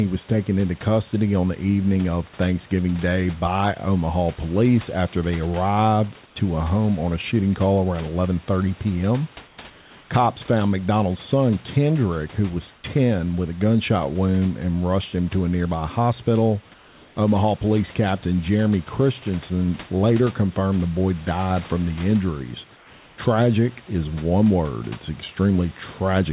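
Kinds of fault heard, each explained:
Clock slip clicks: Faint, evenly spaced ticks run through the whole clip from about 0.18 s, roughly one every 0.15 s. That's likely two unsynchronised clocks drifting apart, around 150 ppm, so a single sample gets dropped or repeated each time the error reaches a full sample.
Comfort noise in place of the background: In the pauses at 6.26, 9.48, 9.7 to 10.1, 12.76, 16.74 to 17.16 and 22.76 to 23.18 s, the real room background gives way to a flat, featureless hiss, about 1 to 8 dB quieter. That's likely discontinuous transmission swapping in synthetic noise while nothing is being sent.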